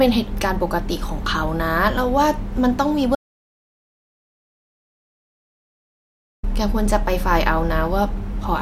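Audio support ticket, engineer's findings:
Audio dropout to silence, 3.15 s to 6.43 s. Speech cuts off mid-flow and returns abruptly. Gap is silent, no room tone, about 3.3 s of content lost. Likely input-side loss, such as a disconnected device, failed link or stray mute. Recorder kept writing silence through the outage.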